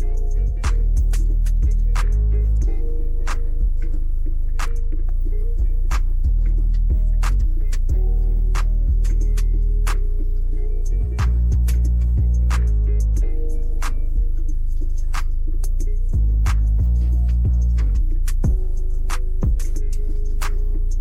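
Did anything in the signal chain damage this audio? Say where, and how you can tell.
No, nothing in the signal chain audibly damaged this audio, and no stage left a trace in the signal.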